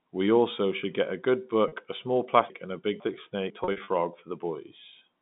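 Telephone-band speech, limited to roughly 150 Hz to 3.6 kHz by G.711 mu-law coding, has a brief buzzy held tone at 1.68 s between "should get a good" and "a small". A stuttering run of such tones follows from 3.64 to 3.88 s. This is packet loss with pitch repetition: the receiver looped the last pitch period over 40 ms of missing audio, then over 140 ms scattered across 240 ms. Between 2.5 and 3.5 s, just after "a small", the sound jumbles because chunks played out of order: a 500 ms chunk arrived one chunk late, leaving three hard joins.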